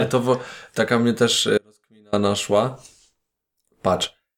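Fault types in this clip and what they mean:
Audio dropout to a faint residue: from 1.58 to 2.13 s, about 0.55 s of the speech abruptly vanishes and then snaps back, with no fade at either edge. The gap is not silent; only a faint sound remains, roughly 35 dB below the signal's normal level. This is likely a break in the wanted signal while the path downstream stayed live, so faint sound carried on through the gap.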